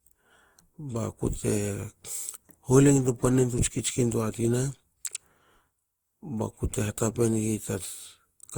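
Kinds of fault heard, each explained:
Generation loss: The speech sounds swirly, smeared and hollow from start to finish, more worn than a single pass at this quality would leave it, and consonant attacks are blurred. The likely cause is repeated lossy re-encoding, around seven generations, each re-quantising on a shifted frame grid. The character points to Opus at about 64 kbit/s. On a spectrogram, the speech bands show smeared texture, and nothing appears above 20.1 kHz. The waveform shows softened transients.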